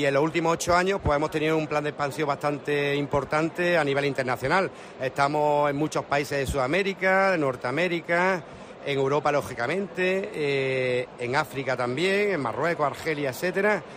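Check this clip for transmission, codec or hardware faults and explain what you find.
No transmission, codec or hardware faults.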